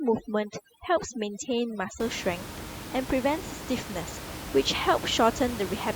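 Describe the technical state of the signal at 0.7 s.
At 0.7 s the signal is inside a stretch of overdone noise removal that runs from the start to 2.0 s. The noise reduction is set too hard. Any frequency band sitting close to its noise estimate gets pushed almost to zero, and the quieter parts of the speech are removed with it. The gaps between sounds fall to near silence scattered with twinkling specks.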